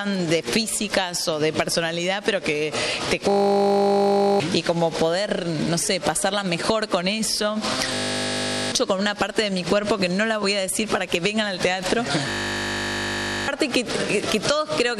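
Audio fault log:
3.3–4.4 s, 7.94–8.72 s, 12.3–13.48 s: system hang loop. The system froze while a 20 ms buffer kept replaying, giving a steady 50 Hz buzz and dropping up to about a second of audio each time.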